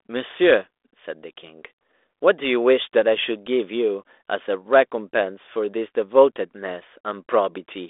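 No technical faults are audible.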